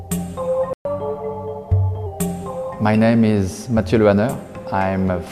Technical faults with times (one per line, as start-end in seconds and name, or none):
0.73-0.85 playback stall
0.85-2.06 catch-up at higher speed